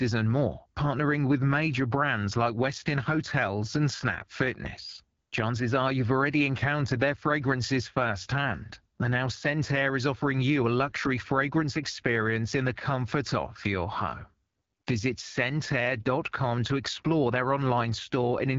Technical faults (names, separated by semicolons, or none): AMR wideband (HD Voice) codec